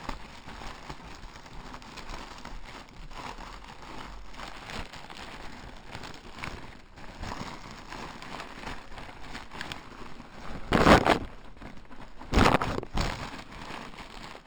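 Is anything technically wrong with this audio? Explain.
Yes, there's imaging from linear upsampling running through the whole clip. The top of the band, just under 6 kHz, sounds dulled, with a faint metallic shimmer in the 6–12 kHz region sitting roughly 25 dB under the sound. That fits 12 kHz audio stretched to 44.1 kHz by straight-line interpolation, which leaves mirror images standing.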